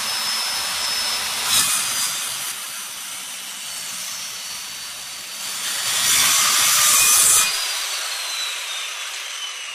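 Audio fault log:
1.39–2.88 s zipper noise: level drops about 10 dB in 3 dB jumps, roughly two per second, each a tick. The waveform envelope shows stair-steps with thin vertical spectrogram lines.
4.13 s corrupt frame decoded: one damaged frame plays as a short blip peaking around -30 dBFS, a small bright spectral patch at the wrong frequencies.
5.29–6.04 s zipper noise: level rises about 10 dB in 3 dB steps, roughly four per second, ticking audibly. The envelope climbs in visible stairs with faint broadband click lines.
9.20–9.23 s compressed frames skipped: about a tenth of a second of audio jumps away, heard as a sudden jump at the join. The waveform shows a discontinuity and the spectrogram a vertical mark at the join.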